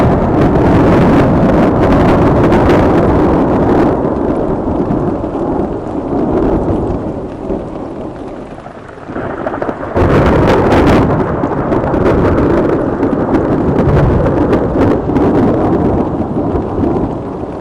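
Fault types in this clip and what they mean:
Hard clipping: Some stage in the chain was driven about 23 dB past what it could pass, so every waveform peak that exceeded its ceiling was sliced flat. With the overload this large, roughly a sixth of the samples sit pinned at the limit throughout the recording. Those squared-off tops add a dense spray of high harmonics, so every louder moment in these everyday sounds carries a harsh, buzzing fuzz rather than occasional crackle.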